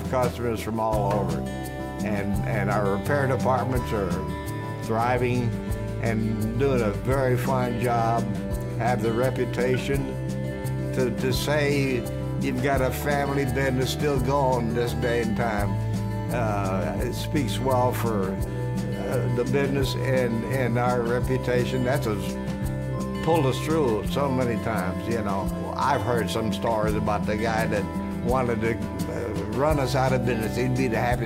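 No technical faults detected.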